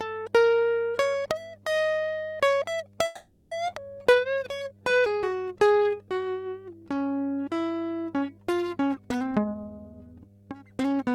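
Mains hum at 50 Hz runs under the whole piece of music, about 30 dB below the signal. It is a fixed low tone that never changes with the music, unlike a low instrument note, so it points to a ground loop or nearby transformer.

From 3.05 to 3.53 s there is a call audio freeze. The last sound is stretched into a fading buzz or hiss for 460 ms, never dropping to silence. The music then resumes exactly where it stopped with nothing lost, most likely because packets were held up and the jitter buffer ran dry.

At 3.67 to 3.70 s comes a skip ahead. Playback jumps forward with only a 10 ms join, and around 300 ms of music is gone. Unlike the freeze just before it, this leaves only a tiny filler and no real pause, just an abrupt splice.

From 4.03 to 5.98 s a jitter buffer slow-down plays the music at 84% speed, adding 328 ms as the receiver repeats pitch periods. The pitch stays put while the tempo drags, which separates it from a tape-style slow-down that would lower the pitch.

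From 9.23 s to 11.09 s a jitter buffer speed-up runs the music at 121% speed, cutting roughly 400 ms by removing short pitch-period slices. The tempo hurries and loses its steadiness, yet the pitch does not rise as it would with simple faster playback.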